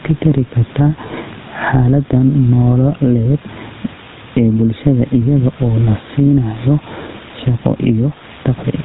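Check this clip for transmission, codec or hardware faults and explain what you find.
Two faults run through the whole speech clip: gain pumping and GSM full-rate codec damage.

Gain pumping is present from start to finish. The level swings by around 10 dB. The room noise sits about 33 dB below the speech. Loud and quiet passages sit unnaturally close together, so the speech sounds squashed. The likely cause is input gain set far too high, with a fast limiter or compressor clamping down on every loud syllable.

The GSM full-rate codec damage is plainly audible throughout. Nothing is heard above 3.8 kHz, which makes the speech dull and narrow. The codec rebuilds the voice from a vocal-tract model fed by a sparse train of regularly spaced pulses. That coarse excitation gives the speech a buzzy, gravelly roughness. The sound fits the 13 kbps GSM full-rate codec used on early mobile networks.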